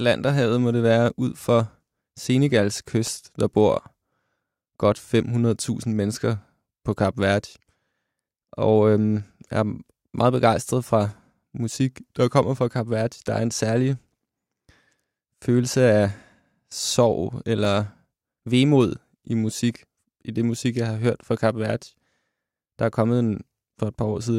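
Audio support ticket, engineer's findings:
CD scratch ticks in the speech, 2.64–4.17 s (8 ticks) and 17.0–18.09 s (6 ticks), about five a second, each only a few ms. Probably a disc blemish beating the error correction once per revolution, so the player patches or mutes samples.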